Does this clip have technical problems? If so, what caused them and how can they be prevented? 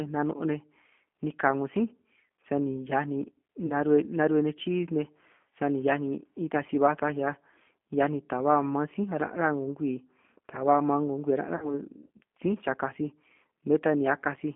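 Yes. Throughout the clip the speech carries G.729 codec damage: a band-limited line of about 200 Hz to 3.4 kHz with a plainly rough, synthetic texture. This comes from rebuilding speech from a filter, pitch predictor and sparse pulses, which fits an 8 kbit/s G.729A stream. To prevent it, use a wideband codec such as G.722 or Opus on the call path.

VoIP packet loss concealed by the speech codec occurs at 3.66 to 3.73 s and at 11.56 to 11.77 s. About 40 ms and 60 ms of audio are missing, which points to two and three lost packets. The decoder extrapolates the last pitch and filter into a fading buzzy tone or coloured noise, and the sound stays weakened briefly after packets resume. To prevent it, give voice traffic priority through QoS and use forward error correction or redundancy.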